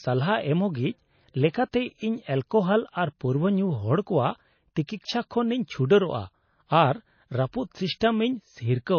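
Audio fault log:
Throughout: low-bitrate audio saved at a high bitrate. Nothing sounds above 6.5 kHz, with dull, smeared speech. Likely a 24 kbit/s-class MP3 re-encoded larger, restoring nothing lost.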